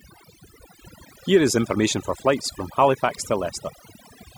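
Overdone noise removal runs through the whole clip: a noise reducer set too aggressively pulls individual frequency bands down or out whenever they sit near its noise estimate, taking quieter parts of the speech too, so the background drops and breaks up into twinkling specks.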